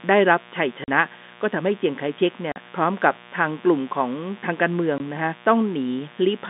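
Mains buzz runs through the whole clip, from start to finish, sitting roughly 20 dB below the speech. Sharp switching spikes from something like a dimmer or rectifier, or a missing shield, leak into the signal twice per cycle of the 60 Hz supply, so the interference is a dense stack of 60 Hz harmonics rather than a pure hum. The result is a steady, raspy buzz under the talker, its upper harmonics trimmed at the top of the telephone band.

Packet loss filled with silence cuts into the speech three times: from 0.84 to 0.88 s, from 2.52 to 2.56 s, and from 4.98 to 5.00 s. Audio went missing in transit, and the receiver played nothing in its place. The first two holes last 40 ms and the third 20 ms, which fits a 20 ms packet, with two packets dropped together in the first two cases. Each gap chops the speech abruptly, leaving a hole with hard edges.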